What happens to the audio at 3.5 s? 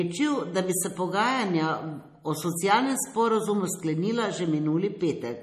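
At 3.5 s the speech sounds watery and swirly, with nothing above 14.4 kHz, and it has sounded this way from start to finish. The likely cause is MP3 compression at a bitrate low enough to fit about 40 kbps. With so few bits, the encoder cuts the treble at a fixed point and drops weak frequency lines. Those lines flicker in and out between frames, which produces the plainly audible swirl and smears the onsets.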